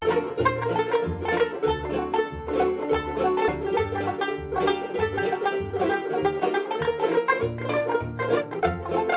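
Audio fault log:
3.48 s, skip ahead. The music jumps forward abruptly with no gap filling the join. Roughly 0.4 s of material is missing. Audio was dropped, in transit or by the jitter buffer when it overflowed, while later audio was already waiting, so the player leapt past it. The two sides of the cut are butted together almost directly. The result is a sudden lurch in the music's flow. The band-limited sound, nothing above 4 kHz, fits the G.711 A-law call path.
4.09 to 5.56 s and 6.05 to 7.18 s, jitter buffer speed-up. The music runs slightly fast, about 2 percent in the first stretch and 3 percent in the second. The pitch stays put. The receiver was holding more audio than it wanted, so it trimmed tiny pitch-period slices over and over. Each stretch loses roughly 40 ms in total. The tempo is no longer steady.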